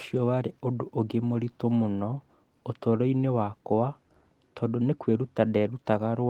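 Nothing in this speech recording stands out as a technical fault, so there's really nothing to flag here.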